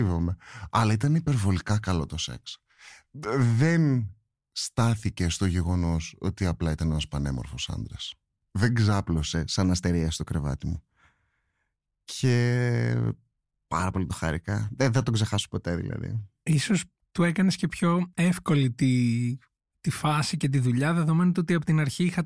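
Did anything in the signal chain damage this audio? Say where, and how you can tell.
Yes. From the start to 9.34 s the speech runs slow and sits low, consistent with a wrong sample rate at the playback stage. Tempo is about 0.92 of normal and pitch is down about 1.5 semitones, with both shifted by the same ratio. That lock-step change, with no change in timbre apart from the pitch, indicates samples clocked out slower than they were captured, without resampling. The ratio fits 24 kHz material played at 22 kHz.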